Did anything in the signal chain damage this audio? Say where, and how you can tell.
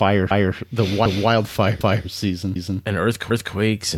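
Yes, overlapping chunks in buffering: 250 ms of speech replays at 0.31, 1.06, 1.81, 2.56 and 3.31 s, every 0.75 s. It is a stutter of duplicated sound, not a dropout, because nothing is lost.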